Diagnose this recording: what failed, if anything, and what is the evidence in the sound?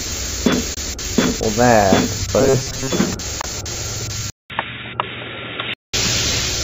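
Bluetooth dropout at the playback stage: the sound cuts out abruptly from 0.74 to 0.79 s and again from 3.41 to 3.46 s, then resumes as if it had kept playing. Each 23 ms gap is likely one lost wireless audio frame. Both show as sharp-edged vertical blank strips on a spectrogram and as flat silent stretches in the waveform.

Robotic sound from repeated short buffers at the driver or buffer stage: from 2.41 to 2.90 s the sound becomes a rigid metallic buzz at 134 Hz. The software is likely looping a roughly 7.5 ms block while most of the real audio is skipped. A spectrogram shows evenly spaced horizontal harmonics at multiples of 134 Hz, and the waveform shows a short repeating shape.

Input switched to a poorer device at the capture stage: at 4.30 s there is a 200 ms silence, and the sound then turns dull until 5.94 s. The band is narrower, and a new noise floor sits about 45 dB below the signal at the same level. 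The likely cause is a narrowband headset or call-profile microphone taking over. A spectrogram shows the upper frequencies cut off across that span.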